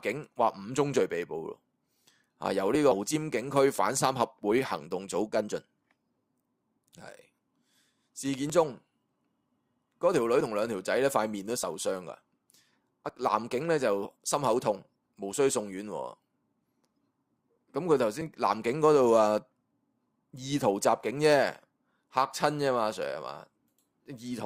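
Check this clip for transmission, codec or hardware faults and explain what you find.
Three kinds of fault are present: one skip ahead, two jitter buffer speed-ups, and four short dropped-buffer jumps.

At 2.91 to 2.93 s there is a skip ahead. About a second of audio was discarded, apparently because the jitter buffer overflowed while later audio was already queued. Playback jumps forward with no gap, and the sound on either side is joined almost seamlessly.

Right after, two jitter buffer speed-ups follow: 3.13 to 3.68 s at 109 % speed, removing around a twentieth of a second, and 4.07 to 5.55 s at 106 %, removing roughly a tenth. The receiver trimmed short pitch-period slices repeatedly to reduce excess buffered delay, so the audio sounds hurried but keeps its pitch.

At 8.50, 11.63, 13.09 and 18.21 s, the audio abruptly jumps forward, with 10 to 30 milliseconds missing, without silence. 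The likely cause is a dropped buffer (overrun): samples weren't read before the hardware overwrote them, so the surrounding audio is spliced directly together.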